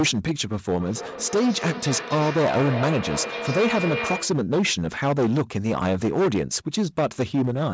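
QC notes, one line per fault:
Throughout: hard clipping. The speech reaches about 13 dB beyond what a stage in the chain could pass, so the peaks are sliced flat, and roughly a sixth of the samples went over that limit. Those squared-off tops create harmonics well above the speech itself, heard as a harsh, gritty fuzz on every louder syllable rather than occasional crackle. Above 8 kHz there is nothing, as expected from the call's microphone processing, which bounds that added grit.
0.79 to 4.57 s: feedback echo between two devices. A second device in the same room is playing back this microphone's audio, and the microphone picks it up again. Its echo canceller only cancels its own playback, so the loop survives. Each phrase returns at a steady interval of about 0.3 s, sounding thinner and more ringing, and at its strongest about 7 dB below the direct speech.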